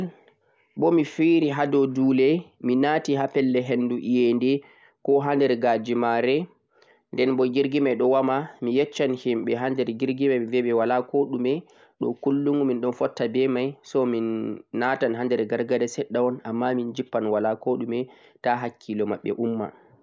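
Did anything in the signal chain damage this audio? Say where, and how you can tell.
No, nothing along the chain seems to have damaged this speech recording, and there's no point where anything in the signal gives itself away.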